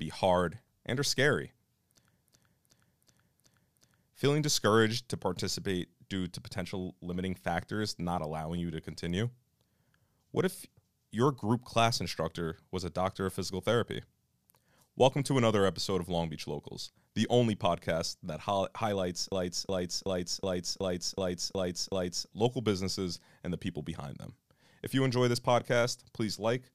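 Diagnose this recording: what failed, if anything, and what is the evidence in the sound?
A 0.37 s slice of speech stutters at 2.23–4.09 s and 19.32–22.29 s, before "local businesses and the". This is a system hang loop: the driver froze while the hardware replayed a ring buffer that fits 16384 samples.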